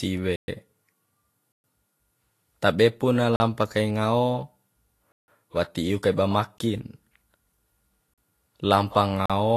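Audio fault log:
throughout, low-bitrate audio saved at a high bitrate: The speech was first squeezed through a low-bitrate encoder, likely Vorbis, then re-encoded to a large high-bitrate MP3. The second pass cannot restore what the first discarded. Nothing exists above 14.2 kHz, so the top end sounds dull and closed-in, and the smeared, swirly coding artefacts of the first encode stay audible despite the generous final file size.
0.36–0.48 s, 1.52–1.64 s, 3.36–3.40 s, 5.12–5.28 s, 6.58 s, 8.14–8.18 s, 9.26–9.30 s, block of digital silence: The output buffer likely went unfilled, so silence replaced the signal seven times. The gaps last 120, 120, 40, 160, 17, 40 and 40 ms, and the one at 3.36 s comes right after "tabe pu na". Each drop to silence and return is instantaneous, with no fade. The longer blocks sound like holes in the speech.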